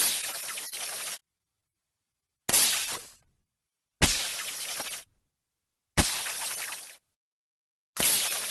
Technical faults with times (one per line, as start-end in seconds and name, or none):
0.69-0.74 short stall from a late packet
1.38-1.64 short stall from a late packet
2.50-2.54 short concealed packet loss